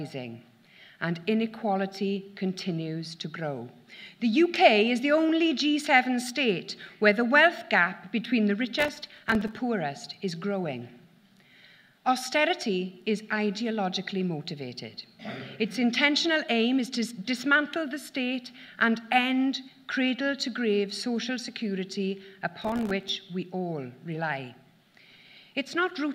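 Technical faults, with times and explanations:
8.79–9.57 s and 22.62–23.09 s, processor overload crackle: the processor repeatedly misses deadlines for very short buffers, around a millisecond and a half, leaving dozens of tiny silent gaps with hard edges. Unlike a single dropout, they pile up into a gritty crackle that ends when the load eases.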